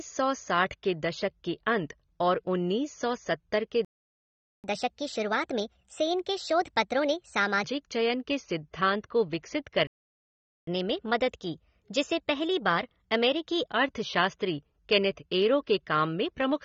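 A low-bitrate encoder, likely AAC compression at something like 24 kbps, has lowered the cut-off and coarsened what remains. The speech sounds dull and smeared throughout, with an audible fizzy, warbling texture on sibilants.

At 3.85 s, just after "उन्नीस सौ सत्तर के", a playback stall occurs, likely because the player ran out of data. The audio cuts to silence for 0.79 s and then resumes where it stopped.

From 4.64 s to 7.64 s, the player uses catch-up at higher speed to clear its backlog, resampling at 1.25 times normal. Speech runs fast and sits roughly four semitones high until it settles back just before "चयन के".

At 9.87 s, a second playback stall, likely from the same starved buffer, silences the audio for 0.80 s.

From 10.67 s to 13.67 s, a gentler catch-up at 1.1 times speed follows, lifting pitch by about a semitone and a half before returning to normal.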